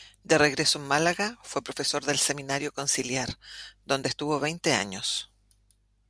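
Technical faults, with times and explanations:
No technical faults detected.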